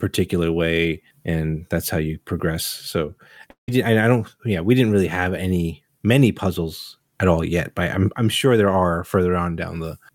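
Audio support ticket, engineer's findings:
Long network dropout, 3.50–3.69 s, likely packet loss on the network path. Receiver's concealment stretched the last speech into a fading buzz, then about 0.13 s of silence. Roughly 0.18 s of speech lost; audio resumes afterwards without it.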